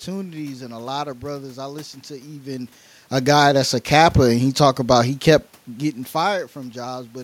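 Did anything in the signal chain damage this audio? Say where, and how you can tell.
Yes. Automatic gain rising in the call processing stage, from 3.11 to 4.54 s, between "I listened to even" and "about he kept getting". The level climbs about 3 dB over 1.4 s, and the room noise swells with the voice, so the gain control lifted the whole input.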